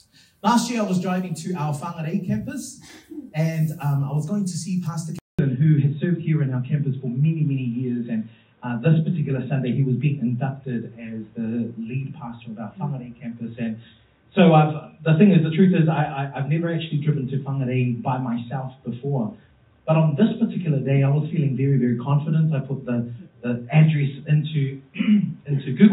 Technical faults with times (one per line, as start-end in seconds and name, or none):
5.19-25.92 input switched to a poorer device